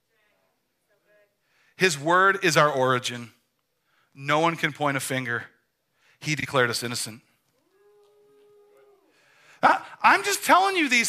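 Frames out of order at 6.40 to 6.46 s and again at 9.66 to 9.73 s: in each case two neighbouring frames, each about 26 ms long (which fits a typical compressed-audio frame size), were swapped and decoded in the wrong sequence. The roughly 64 ms stretch therefore plays with its two halves exchanged, heard as a brief garbled flutter. Nothing is lost, so the timing stays intact.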